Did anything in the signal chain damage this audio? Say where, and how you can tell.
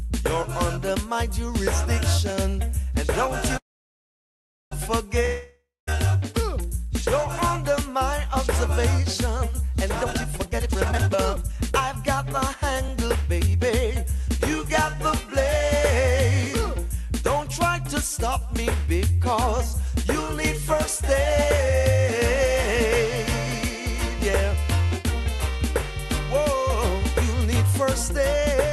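Yes. From 3.57 to 4.73 s the sound trails off into a fading hiss and then silence, and resumes exactly where it stopped. This is a call audio freeze, likely caused by delayed network packets draining the jitter buffer.

From 5.25 to 5.91 s a similar fade drops into silence, but the sound returns about 0.62 s further along. That gap is likely a long network dropout in which packets never arrived.

Between 9.90 and 14.04 s the sound runs about 27% fast and feels hurried at unchanged pitch. This is a jitter buffer speed-up: the buffer trimmed short pitch-period slices, about a second in total, to cut its backlog.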